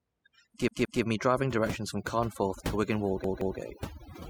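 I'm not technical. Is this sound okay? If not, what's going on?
No. Two faults stand out.

The first is overdone noise removal, and it runs the whole way through. A cleanup tool was set too strong. It cut away background noise and quiet parts of the speech too. The background drops and breaks up into twinkling specks.

The second is a repeated buffer, heard twice: from 0.68 to 1.02 s, and from 3.24 to 3.58 s. Each time, new audio arrived late, so the device replayed the last short chunk, about 0.17 s long, two extra times. You hear a quick stutter with hard joins.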